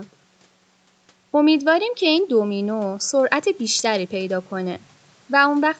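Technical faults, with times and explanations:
No technical faults are present in this speech clip. It passed through normal call microphone processing and a WebRTC call path, and nothing can be heard above 8 kHz, which fits the audio band of a call codec such as Opus.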